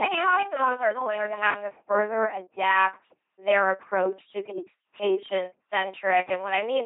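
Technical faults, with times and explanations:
Throughout: LPC-10 vocoder. The speech becomes a buzzing robotic voice with nothing above 3.8 kHz, from a 2.4 kbit/s pulse-or-noise source. Unlike other codecs, it has no warbling, just hard voiced/unvoiced switches.
0.00–1.64 s: doubled audio track. A full-band copy, already present at the start, trails about 0.4 s behind at roughly 5 dB lower and then cuts off abruptly. Unlike an echo, it has no decay or room colour. The likely cause is a second, slower capture path.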